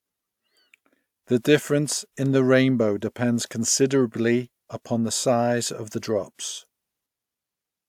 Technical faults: none

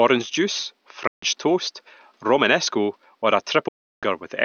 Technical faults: Bluetooth dropout

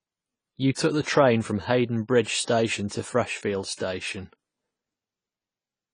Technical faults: AAC compression; pre-echo

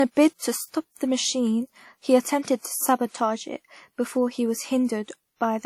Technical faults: low-bitrate audio saved at a high bitrate

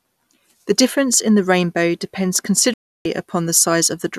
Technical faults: digital broadcast dropout

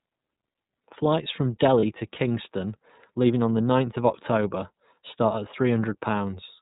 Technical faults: iLBC codec; lost iLBC frames

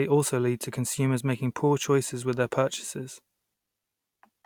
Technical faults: none

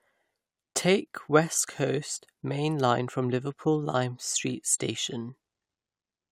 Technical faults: none

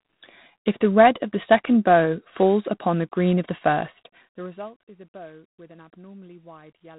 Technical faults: G.726 ADPCM

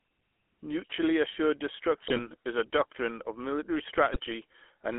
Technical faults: GSM full-rate codec; GSM bit errors

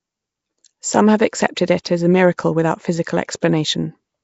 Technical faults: Nellymoser compression; pre-echo

